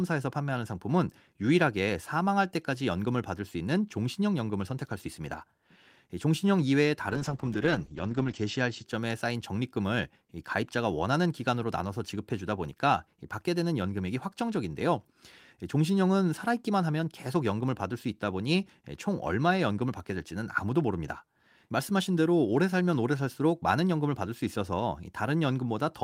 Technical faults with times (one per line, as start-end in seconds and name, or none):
7.10-8.91 call bitrate drop